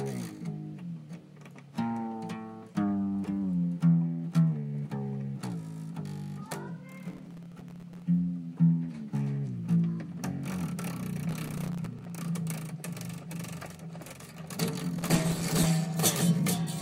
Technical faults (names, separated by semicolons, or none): processor overload crackle